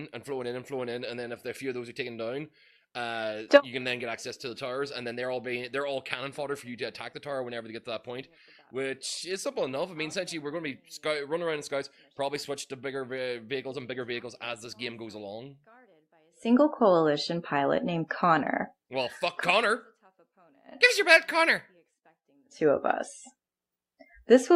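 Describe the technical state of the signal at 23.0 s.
At 23.0 s the signal is intact, with no audible fault at that moment.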